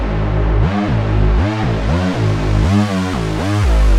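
Nothing goes wrong anywhere in this one; there's no glitch, dropout or distortion to point to at any moment.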